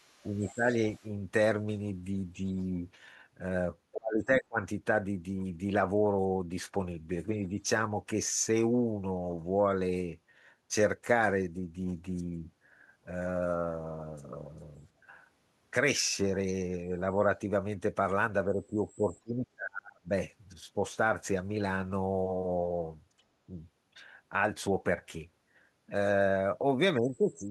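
From 0.00 to 1.08 s, the echo canceller likely failed to remove all of the loudspeaker signal, so the other side's voice leaks through faintly, roughly 30 dB under the speech. Within that stretch, from 0.31 to 0.65 s and again from 1.00 to 1.05 s, speech is suppressed in double talk. The canceller likely turned down both voices while both sides spoke, so the talker dips by about 10 dB and then about 15 dB. The same suppression cuts much deeper later. It drops about 30 dB from 3.93 to 4.58 s, about 35 dB from 18.48 to 20.1 s, and about 20 dB from 26.98 s to the end.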